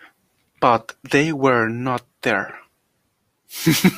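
No technical faults can be heard anywhere in the speech recording. There is nothing to place on a timeline, so no events or times are listed.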